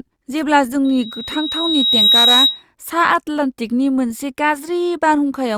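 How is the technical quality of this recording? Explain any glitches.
The speech recording has one fault. Loudspeaker feedback squeal, 0.84 to 2.63 s: the microphone hears its own loudspeaker and loop gain passes one at 3.8 kHz, so that tone swells over about one and a half seconds to around 5 dB above the speech.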